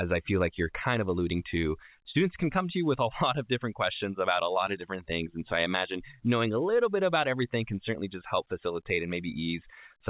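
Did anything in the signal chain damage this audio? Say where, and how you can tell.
No, nothing in the chain damaged this speech; the call path behaves as a narrowband telephone link should, with nothing above 4 kHz, which fits a G.711 codec.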